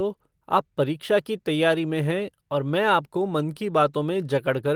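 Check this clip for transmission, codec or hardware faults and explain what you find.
Two transmission faults are audible in this speech clip, both from network packet loss.

Lost packet rebuilt from error correction at 1.79 s: a 20 ms stretch, which points to a single lost packet, was replayed from a low-bitrate backup copy, so it sounds briefly rougher and noisier rather than dropping out.

Short concealed packet loss from 3.53 to 3.57 s: about 20 ms never arrived, and the decoder extended the preceding sound to fill it, leaving a brief smear or wobble.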